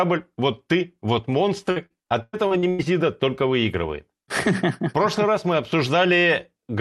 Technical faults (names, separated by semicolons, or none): repeated packet loss (robotic sound)